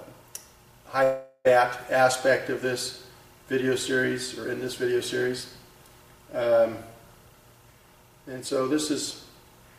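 From 1.03 s to 1.48 s the audio breaks off. The last sound is stretched into a fading buzz for about 0.41 s, then roughly 40 ms of silence follows before the audio resumes with about 0.42 s absent, likely a long network dropout.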